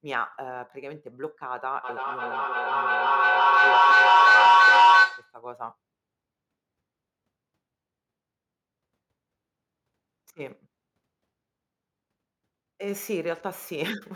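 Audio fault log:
1.83 to 5.41 s, feedback howl: a piercing tone near 1 kHz swells to about 14 dB above the speech, with the loop repeating roughly every 0.3 s, because a microphone-to-loudspeaker loop between two devices in one room gains level on each pass and narrows to its favoured frequency.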